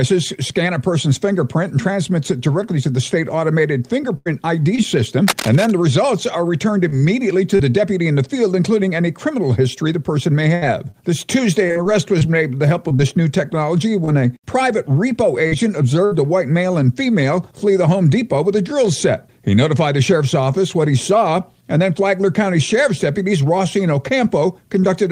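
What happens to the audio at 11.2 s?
At 11.2 s you're inside a run of scattered short gaps that lasts from about 10.55 to 14.09 s. Around ten small chunks of audio, roughly 240 ms in all, got lost or arrived late, the longest only about 70 ms. The receiver papered over most of each hole by stretching the last bit of sound forward, so you get quick ticks, smears and little hiccups dotted through an otherwise clear stretch.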